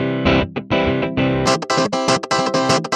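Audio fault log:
1.46–2.96 s, wrong sample rate: from 1.46 s to the end, the audio plays at exactly twice its proper speed, and its pitch rises by a full octave, 12 semitones. Because speed and pitch shift together by the same 2:1 ratio, the samples are being clocked out faster than they were captured, with no conversion in between. This fits material recorded at 16 kHz but played back at 32 kHz, which makes the sound high and hurried.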